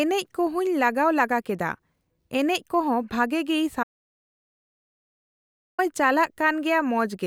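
From 3.83 s to 5.79 s the speech stops dead, an audio dropout to silence lasting about 1.95 s. It is likely that the input was lost while writing continued. The gap is silent with no room tone, a flat waveform line and an empty spectrogram band.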